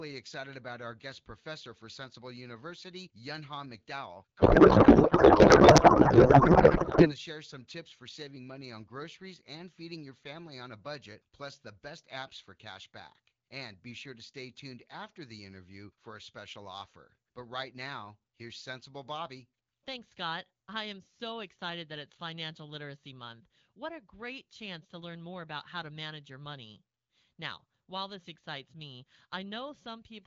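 From 4.39 to 7.14 s there's a codec payload misread: the speech turns into garbled noise and warble that barely tracks it, which fits octet-aligned AMR being unpacked as bandwidth-efficient. It clears right before "share some tips for", back to clean AMR-WB.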